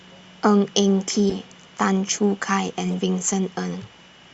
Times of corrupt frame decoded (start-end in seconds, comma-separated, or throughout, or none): 1.30-1.34, 2.92